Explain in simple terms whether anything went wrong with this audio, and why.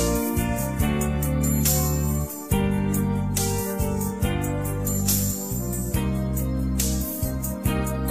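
Nothing went wrong here; no faults can be heard.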